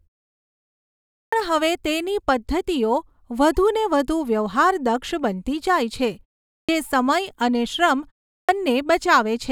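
Clipped start after a pause at 1.18, 6.54 and 8.33 s: the output device sleeps through silence and wakes late, so each resumption loses roughly 0.15 s and begins abruptly.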